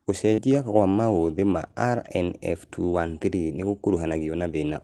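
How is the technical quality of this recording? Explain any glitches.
The speech has one glitch, heard through a call codec that cuts the highs near 12 kHz. At 0.33 to 0.40 s there is short concealed packet loss. About 40 ms never arrived, so the receiver extended the preceding sound to fill it. You hear a brief smear.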